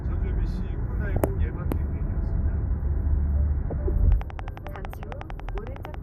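Across the whole clip the sound is dull, with a granular, gurgling texture as upper bands flicker in and out. This is the signature of MP2 compression, most likely from a starved sub-band encoder, which fits an 80 kbps stream. Unlike the later bursts, it is steady rather than episodic.

From 1.05 to 1.28 s, and again from 3.63 to 3.73 s, DAB burbling breaks through. Bit errors at a fraction of a percent slip past error correction, so short blips of noise land in single sub-bands. The result is brief bursts of burbling sitting on top of the constant codec dullness.

From 4.12 to 5.95 s comes a train of clicks: about twenty near-identical ticks at a regular 11 per second, peaking about 5 dB above the sound, likely from interference or a faltering interface. Their even, pulse-like repetition separates them from the burbling.

A final DAB burbling burst from 5.72 to 5.80 s overlaps the clicks, adding a short burst of burbling alongside the ticking.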